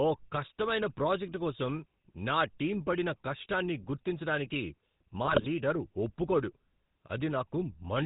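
From start to finish the speech runs through the GSM full-rate codec, whose coarse vocal-tract model and sparse pulse excitation suit a 13 kbps link. Everything above 4 kHz is gone, and the voice carries a plainly audible buzzy, gravelly roughness.

Between 5.24 and 5.47 s, GSM bit errors corrupt the decoder's filter, pitch and gain parameters across a run of consecutive frames. The spectrum twists and the level jumps frame by frame, so the speech breaks into squawks, pops and gargling.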